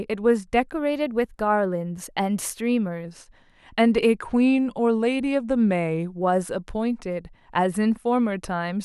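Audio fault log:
0.74–3.05 s, drift correction step: the speech jumps about 6.3% fast and roughly a semitone sharp, then snaps back, likely a clock-sync rate step.
4.22–6.21 s, drift correction step: this time it drops about 6.3% slow and just over a semitone flat, likely the same resampler pulling its buffer the other way.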